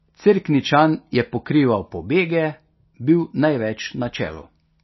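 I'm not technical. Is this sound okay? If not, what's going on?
No. The speech sounds dull and watery throughout, with nothing above about 5.8 kHz. This is likely MP3 compression squeezed too hard.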